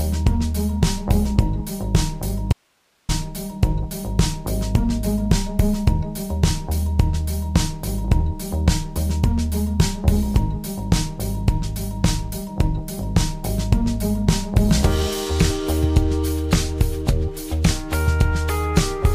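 At 2.53 s the audio cuts out abruptly and stays gone until 3.09 s, a gap of about 560 ms. This is an audio dropout to a faint residue: instead of true silence, the gap holds only hiss, sitting roughly 45 dB below the normal signal level. The onset and return are sudden rather than faded. The likely cause is a momentary loss of the wanted signal upstream while the downstream path remained live and kept passing its own noise.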